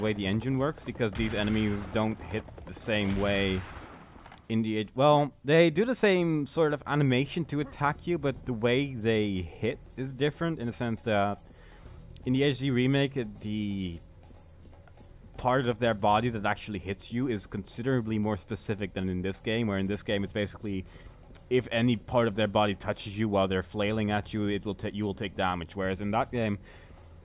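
No technical faults can be heard anywhere in the clip. There is no moment in the audio that calls for a time mark or a closer listen.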